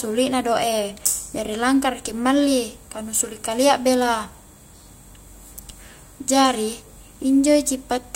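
Nothing goes wrong anywhere in this bit of speech, so there's no fault to point to at any moment.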